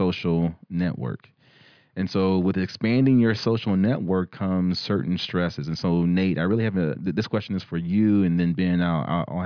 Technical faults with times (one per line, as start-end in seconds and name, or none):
none